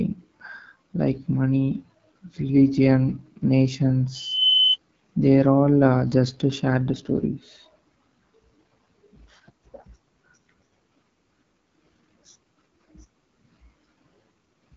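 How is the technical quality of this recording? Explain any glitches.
The speech sounds rough and raspy for the whole 15 seconds, and a sharp tonal squeal breaks in partway through.

The raspiness comes from the AMR wideband (HD Voice) codec working at one of its lowest rates, which fits the 8.85 kbit/s mode. At that rate the codec rebuilds the voice from a pulse-driven vocal tract model with too few bits to capture fine detail. The result is grainy and buzzy. Nothing is present above 7.5 kHz, so the top end sounds closed off, and the highest band has a hissy, synthetic quality.

From 4.14 to 4.77 s a steady tone at 3 kHz rises over about a third of a second until it sits roughly 5 dB above the speech, then stops. This is loudspeaker feedback squeal. A microphone picked up the loudspeaker it was feeding, and at 3 kHz the loop gain went above one. The tone reinforced itself on each pass.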